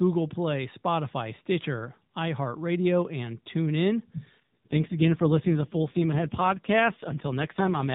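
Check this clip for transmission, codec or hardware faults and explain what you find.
There is one fault, an AMR rate drop, heard against the 4 kHz ceiling of the narrowband mobile codec.

From 4.40 s, just after "and tune in", to the end, speech turns rougher and more synthetic without gaps or band change. This fits the codec dropping from 12.2 to 4.75 kbps, with spare bits likely going to error protection on a weak link.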